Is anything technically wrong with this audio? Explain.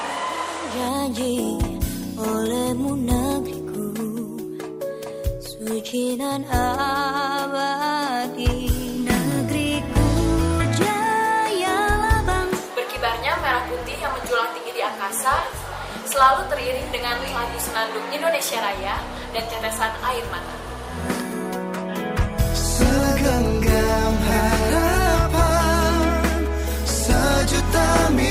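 No, nothing technically wrong can be heard anywhere in this audio.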